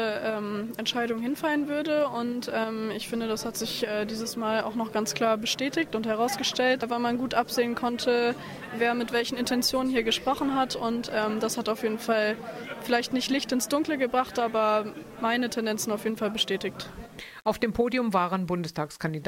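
From start to finish the audio carries a grainy, gritty distortion that rises and falls with the sound itself, sitting roughly 35 dB below the signal. Quiet passages sound roughest, with the faintest parts sputtering or dropping out. The likely cause is low bit depth without dither: samples rounded to about 8 bits, so the error tracks the signal. On a waveform, quiet stretches show visible stair-steps; a spectrogram shows broadband hash that appears only when sound is present.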